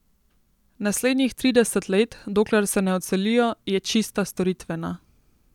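Speech, with no audible technical faults anywhere.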